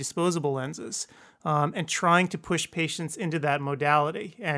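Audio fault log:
No audible faults were found in this speech recording.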